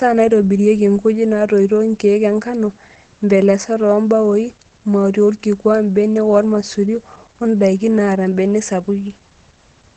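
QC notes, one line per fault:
Throughout: Opus voice compression. The speech has a muffled, somewhat hoarse and faintly robotic quality, and nothing comes through above about 8.8 kHz. That fits Opus running its SILK linear-prediction coder in wideband mode at a low rate, probably around 12 kbps with 20 ms frames. At that rate the top of the band is cut off and the excitation is coded coarsely, which is where the dullness and the buzzy, synthetic edge come from. The damage is plainly audible.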